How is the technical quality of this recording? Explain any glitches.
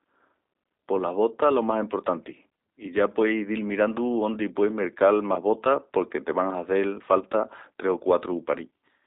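The recording is narrowband and audibly coded from start to finish. Throughout, the speech sounds thin, slightly rough and synthetic, squeezed into a band of about 300 Hz to 3.7 kHz. That is the G.729 codec, which rebuilds each short frame from a vocal-tract filter, pitch prediction and a few pulses, a roughness that fits an 8 kbit/s VoIP line.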